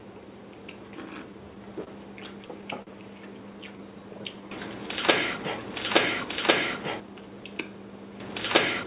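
At 1.84 s and again at 2.82 s, a packet arrived late and the jitter buffer ran dry. These are short stalls from a late packet: the receiver stretched the last sound by about 26 ms and then 45 ms, so each moment hangs briefly before resuming with nothing lost.

From 3.53 to 4.89 s, a jitter buffer slow-down builds up a reserve by repeating single pitch periods, adding 73 ms. The sound runs at 95% speed at unchanged pitch, slightly drawn out.

From 7.00 to 7.62 s, a jitter buffer speed-up trims surplus delay by cutting short pitch-period pieces, removing around 70 ms. The sound plays at 111% speed at unchanged pitch and feels hurried.

All of this rides on a call path with nothing above 4 kHz, consistent with G.711 mu-law at 64 kbps.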